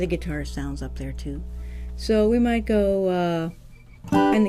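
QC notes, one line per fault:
0.00–2.92 s, mains hum: a steady low 60 Hz tone sits about 10 dB below the audio, then stops, from power-line current coupling in through a ground loop or nearby transformer.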